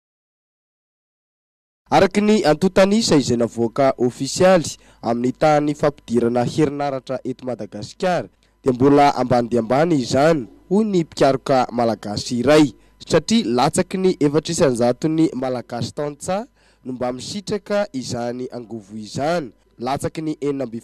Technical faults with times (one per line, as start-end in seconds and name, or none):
6.69-8.68 sudden gain jump
15.39-20.83 sudden gain jump